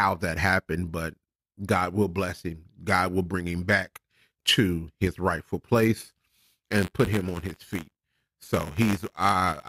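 Speech with buffer tearing from 5.96 s, right after "back to his rightful", to the end at 9.68 s. A robotic rattle at 93.8 Hz, fitting a 512-sample buffer, comes from a tiny slice of each period replaying audio about 20 ms old. Unlike random dropouts, it keeps a fixed rate and follows the signal.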